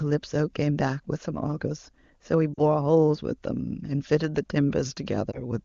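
At 2.53 to 2.61 s the speech briefly smears and sags, which fits about two lost AMR speech frames. The decoder is repeating its last good settings with falling gain. At 5.31 to 5.40 s a shorter dip suggests one lost frame.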